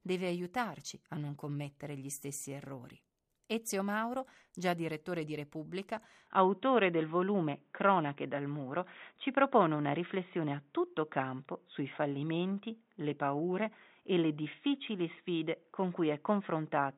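At 6.27 s the audio turns dull and boxy, with nothing above 3.8 kHz. The level shifts by about 5 dB, and a faint new noise floor appears, with no gap at the change. This lasts to the end and points to an input switched to a poorer device, likely a narrower-band microphone or headset.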